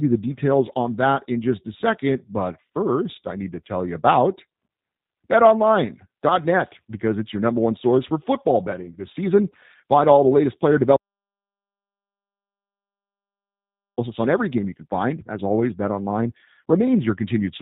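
Throughout, the speech has the rough, slightly buzzy synthetic texture and the missing top above 4 kHz that fit G.729 at 8 kbit/s, unlike plain low-pass dullness.

At 10.96 s, right after "all the latest player", there is an audio dropout to silence lasting about 3 s until "on every game you" at 13.98 s. It is silent with no room tone, likely from a lost input.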